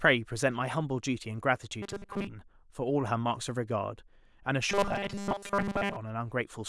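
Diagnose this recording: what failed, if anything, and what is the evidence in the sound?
Two stretches of robotic sound from repeated short buffers, at 1.83 to 2.28 s and 4.70 to 5.97 s, where the speech turns into a rigid metallic buzz pinned at 200 Hz. That's likely a starved driver or buffer stage looping about 5 ms chunks while most of the real audio gets skipped.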